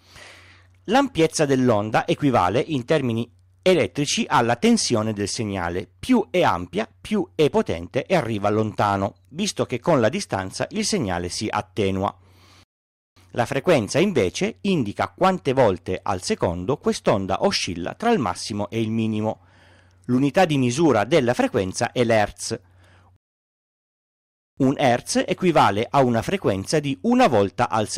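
At 12.63 s the speech halts in a rebuffering stall: the player has run dry of downloaded audio and waits, adding about 0.53 s of silence before resuming at 13.17 s. A longer stall follows from 23.16 to 24.57 s, adding 1.41 s. Unlike a dropout or packet loss, no speech goes missing. Each gap is inserted time, and the sound picks up exactly where it stopped.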